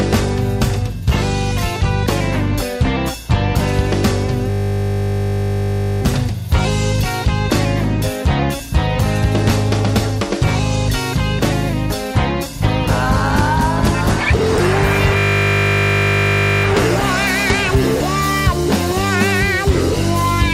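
At 4.5 s and again at 15.18 s you get a system hang loop. The machine stalled while the sound hardware kept replaying the same 20 ms slice of its ring buffer, roughly seventy-odd times each go, until things recovered at 6.02 s and 16.64 s. A loop that short doesn't stutter. It fuses into a flat, steady buzz at 50 Hz. When it clears, the sound picks up with essentially nothing missing.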